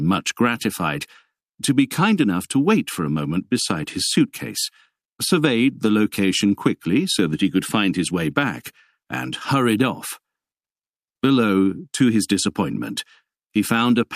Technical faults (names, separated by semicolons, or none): none